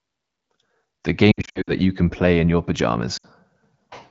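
Lost AMR speech frames at 1.32–1.72 s, in short scattered gaps, and at 3.17–3.26 s: the decoder reuses stale settings at fading gain, so speech warbles and thins.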